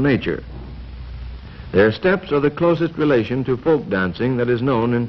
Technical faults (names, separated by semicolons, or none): Bluetooth SBC bit pool drop